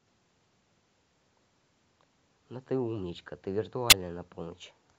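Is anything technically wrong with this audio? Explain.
Yes. A corrupt frame decoded runs from 3.90 to 3.93 s: flipped bits in a couple of compressed frames were decoded anyway, so misread gains and codes put energy at wrong frequencies. The result is a brief burst peaking around -10 dBFS.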